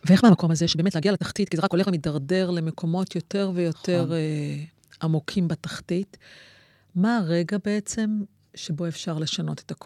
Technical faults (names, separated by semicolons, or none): time-stretched section